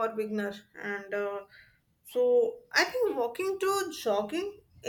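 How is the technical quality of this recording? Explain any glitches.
No technical faults can be heard in this recording.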